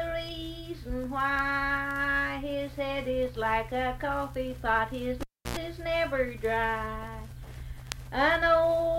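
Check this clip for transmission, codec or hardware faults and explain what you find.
One hardware fault: a cable pulled and plugged in, 5.21 to 5.57 s. The live lead loses contact with a pop, leaving near silence for 310 ms; on reinsertion the tip picks up 91 ms of 60 Hz mains buzz, then a second pop restores the sound.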